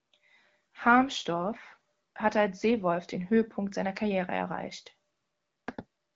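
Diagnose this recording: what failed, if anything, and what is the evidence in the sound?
Nothing in this speech recording has failed. It carries the light coloration and top end stopping near 7.5 kHz of a working AMR wideband (HD Voice) path, consistent with one of that codec's higher rates.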